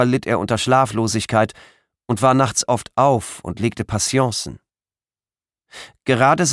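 There are no technical faults to describe in this clip.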